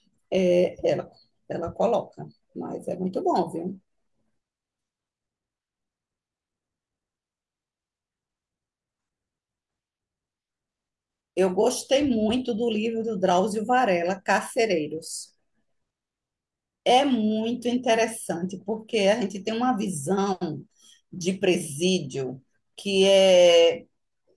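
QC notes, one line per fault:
No faults found in this clip.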